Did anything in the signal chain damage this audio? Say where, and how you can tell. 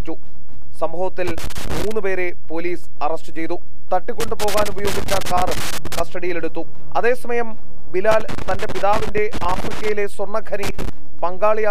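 Yes. The whole clip carries a DC offset of about -12 dBFS, which points to the analogue wiring or the converter input rather than anything digital downstream. You can't hear it as such, but the waveform sits visibly off the zero line throughout, and the spectrum shows steady energy at the very bottom. That constant shift eats roughly a quarter of the available headroom on one polarity, bringing clipping closer on peaks.

The loose connector crackle also belongs to the analogue wiring stage. Irregular bursts of crackle and scratching occur from 1.27 to 1.92 s, 4.20 to 6.00 s, 8.11 to 9.89 s and 10.63 to 10.89 s. A worn or dirty contact is intermittently making and breaking, chopping the signal in rapid fragments. Because the line also carries that DC offset, each break and remake adds a pop, which thickens the crackle.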